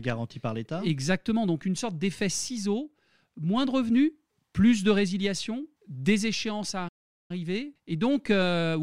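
At 6.88 s the speech cuts off mid-flow and the output falls completely silent until 7.31 s, a gap of about 414 ms, before the sound resumes. That dead hole in the middle of continuous audio is a playback stall. The likely cause is that the player ran out of buffered data, or its playback thread was briefly blocked, so nothing reached the output until it recovered and carried on.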